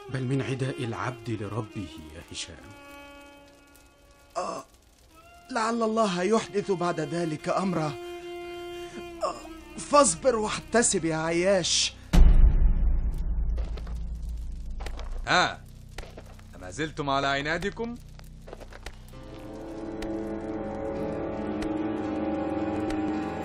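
No technical faults can be heard anywhere in the audio, and the signal stays steady and intact throughout.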